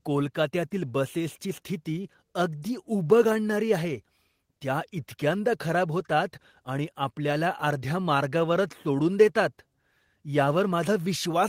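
No technical faults are audible anywhere in the speech recording.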